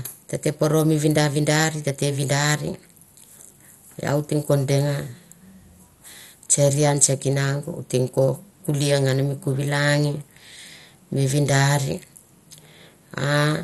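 Speech with plainly audible MP2 compression throughout: dull, gurgling and granular, with nothing above 12.2 kHz, likely from Layer II coding at about 64 kbps.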